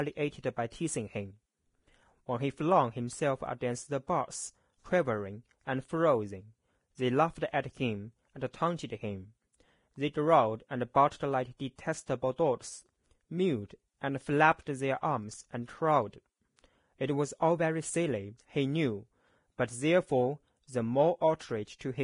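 From start to finish the speech carries a hissy, grainy texture, and there's nothing at all above 10.6 kHz. That's likely Vorbis compression at a low setting, consistent with something around 30 kbps. The codec keeps a smooth outline of the spectrum, but it quantises the upper bands so coarsely that their fine detail turns into noise-like fuzz. The damage is heavy: tones sound roughened, consonant attacks smear, and the top end stops abruptly.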